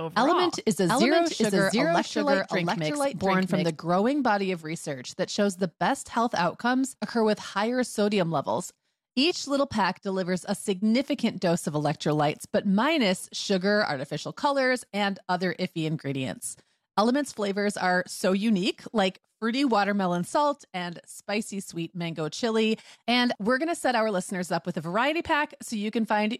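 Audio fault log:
0.0–3.7 s, doubled audio track: a full-band copy as loud as the original trails roughly 0.7 s behind, likely from a slower capture path; the spectrogram shows duplicated patterns ending abruptly.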